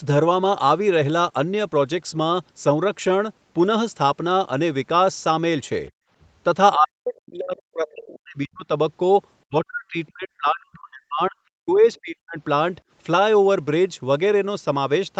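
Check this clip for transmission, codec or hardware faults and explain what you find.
Three kinds of echo-canceller fault appear in this speech, all between about 6 and 12.4 s. The audio also passes through a call path whose spectrum stops at 8 kHz, which fits a wideband Opus call.

Background gated by the echo canceller, 5.92 to 6.10 s. While the far end played, the canceller clamped the microphone down by about 30 dB. The room tone briefly vanishes, then returns. On a waveform, the noise floor drops to near-silence. A spectrogram shows a blank vertical strip about 200 ms wide.

Speech suppressed in double talk, at 6.75 to 8.65 s, 9.46 to 11.36 s, 11.56 to 11.85 s and 12.01 to 12.38 s. Both sides were likely talking at once, so the canceller attenuated the near talker too, by up to about 40 dB. The speech dips and breaks into pieces. On a waveform, the envelope collapses in chunks. A spectrogram shows harmonics fading or cutting out.

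Other side's voice leaking through, 11.95 to 12.00 s. A short scrap of the far-end voice slips through between suppressed stretches, likely from residual loudspeaker echo that the canceller missed. It sits about 35 dB below the speech as a faint fragment, visible only as a weak 50 ms smudge on the spectrogram.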